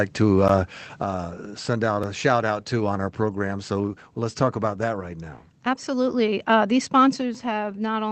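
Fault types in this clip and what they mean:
Block of digital silence: Three times the audio just drops to silence and snaps straight back, with no fade. Count the fault at 0.48 s, about 11 ms long, which fits a 512-sample buffer; at 2.04 s, about 3 ms, fitting a 128-sample buffer, right between "send out" and "a shout out to"; and a tiny 1.5 ms one at 7.35 s. They come across as ticks rather than audible holes, the sort of dropout you get when the output buffer isn't filled in time.
Microphone volume stepped down: At about 1.03 s, just before "send out a shout", the whole signal, voice and background together, falls by about 5 dB in a single step instead of easing down. That's likely the call software's automatic gain control deciding the mic was running too hot and knocking the device's input volume down a notch.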